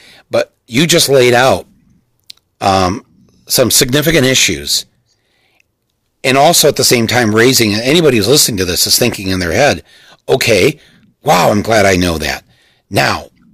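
Hard clipping runs through the whole speech clip. Driven about 6 dB too hot, a few percent of samples hit the ceiling and flatten, adding crackle on peaks.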